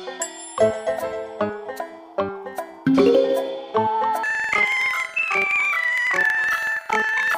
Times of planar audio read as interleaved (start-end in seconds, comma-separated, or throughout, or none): 4.23-7.37